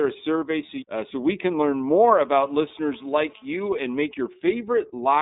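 Throughout, the speech carries the iLBC codec sound. The band runs from 200 Hz to 3.7 kHz, and the voice is plainly rough and synthetic, which fits the 13.33 kbps mode.

From 0.66 to 0.70 s, after "a survey", there are lost iLBC frames. The gap fits a single 30 ms frame. The decoder repeats a pitch cycle with noise, giving a brief buzzy held vowel. Clarity returns at once before "uh so we can".

From 1.91 to 4.00 s, after "so we can learn", GSM phone buzz appears. A nearby phone on a call pulses at 217 Hz. The audio circuit rectifies those bursts into a steady, raspy, harmonic-rich buzz about 32 dB below the speech.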